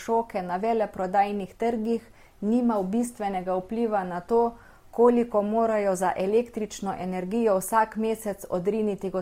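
From start to finish the speech carries two layers of smeary, swirly compression artefacts at once, with nothing above 16.5 kHz. It's likely transcoding between lossy codecs, consistent with a low-rate Opus pass re-encoded to MP3, each stage's artefacts stacking audibly.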